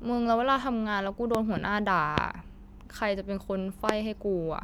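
Loud pops land on the speech at 1.35–1.59 s (a double pop), 2.18–2.20 s and 3.89–3.92 s, peaking about 20 to 25 dB above the signal. Each is a sharp transient over continuing speech, likely a voltage pulse from a switch, connector or static discharge.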